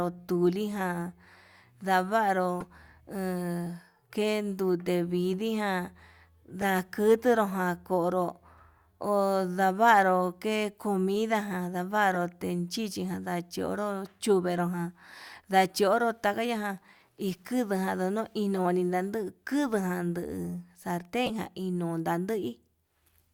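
Corrupt frame decoded at 2.60–2.64 s, 6.61–6.64 s and 12.13–12.17 s: damaged compressed frames were played anyway, so misread gains put energy at wrong frequencies, giving brief chirps and blips peaking around −25, −20 and −20 dBFS.

Low bit depth without dither from 17.24 to 19.09 s: quieter speech turns gritty, with grain that tracks the sound at around 40 dB below it. This is likely rounding to a 10-bit signal with no dither. A corrupt-frame blip at 18.56–18.59 s falls inside this stretch, and another at 21.26–21.31 s is the loudest, near −15 dBFS.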